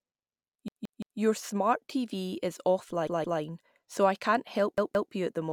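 Speech clip with three stutters from a repeated buffer, where fresh audio didn't arrive in time and the device replayed its last chunk. From 0.68 to 1.2 s one piece about 0.17 s long plays three extra times. From 3.07 to 3.41 s, just before "so I can't help", it repeats twice more, and again from 4.78 to 5.12 s, between "so I can't help" and "you at the". Each repeat has a hard join, and the length fits an 8192-sample buffer.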